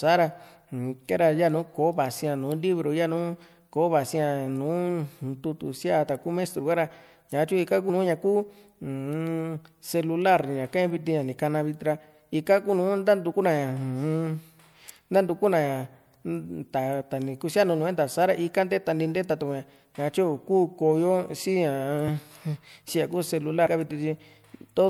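Compressed frames skipped at 7.89, 13.31, 22.07 and 23.65 s: the speech jumps ahead by roughly 50, 50, 20 and 70 ms as whole 24 ms frames go missing or are rejected by the decoder.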